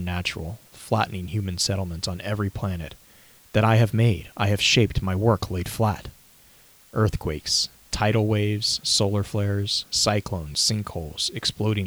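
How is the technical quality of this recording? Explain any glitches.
The recording has one fault, present from start to finish: low bit depth with dither. The speech sits on a constant, even hiss with no crackle or distortion.

Throughout, the audio is carried at 8 bits, with dither added before each sample is rounded, so the rounding error becomes steady white noise about 30 dB below the speech. A spectrogram shows a flat noise floor across all frequencies, and the waveform shows a fuzz that never drops out in pauses.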